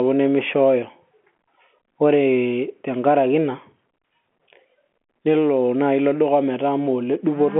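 Nothing in this speech clip points to a technical fault. The telephone band comes through as expected for G.711 coding, with the sound confined to roughly 200 Hz to 3.4 kHz and nothing above 4 kHz, as a 64 kbps A-law line would give.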